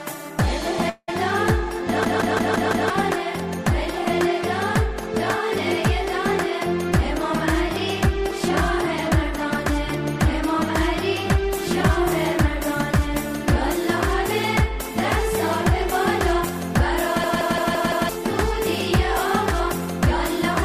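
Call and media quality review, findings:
Long network dropout, 0.89 to 1.10 s. Sound smears into a fading buzz, then brief silence. Likely packet loss; about 180 ms never played, resumes past the gap.

System hang loop, 2.05 to 2.90 s and 17.24 to 18.09 s. Machine-gun stutter, 0.17 s chunk repeating at 5.86 Hz. Fits an 8192-sample ring buffer cycling during a driver freeze. Roughly a second lost each time.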